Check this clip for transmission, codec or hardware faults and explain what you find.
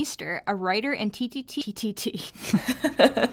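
Two faults are present in this speech clip: a skip ahead, then a jitter buffer speed-up.

From 1.61 to 1.63 s there is a skip ahead. Roughly 0.7 s of speech is missing. It was dropped in transit, or discarded when the jitter buffer overflowed, while later audio was already queued. Nothing fills the gap. Playback simply jumps forward. The two sides meet almost directly, so the speech lurches abruptly. Cutting that stretch also shrinks the playback delay by a similar amount.

From 1.71 to 3.26 s there is a jitter buffer speed-up. The buffer was holding more audio than its target. The receiver trimmed it down by removing short slices of one or a few pitch periods, again and again. Around 70 ms is taken out in total. The speech runs at about 104% of normal speed. Pitch stays the same.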